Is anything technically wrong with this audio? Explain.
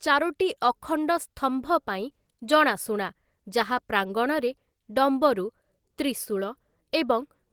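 No, nothing is technically wrong with this audio.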